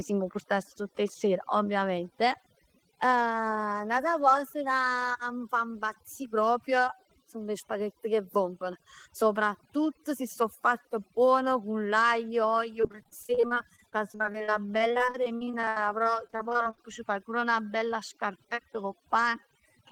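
A noise reduction stage set far too aggressively runs across the whole speech recording, shutting down frequency bands it judges close to the noise floor and taking quieter parts of the voice with them. This overdone noise removal leaves near-silent gaps sprinkled with twinkling specks.

From 12.81 to 16.79 s, between "cu l'aglio l'uogl" and "c' fai pur 'na", packets drop out again and again, each hole patched by stretching the previous sound, the longest lasting 73 ms. Dozens of short gaps cover about a quarter of the span, producing repeated packet loss with a choppy, robotic texture.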